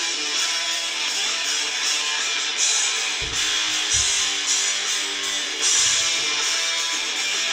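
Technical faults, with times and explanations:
5.59 s to the end: doubled audio track. A second copy of the sound, likely from a slower capture path, enters abruptly about 150 ms late and about 5 dB quieter, giving a dry, full-band slapback echo with no decay or room colour.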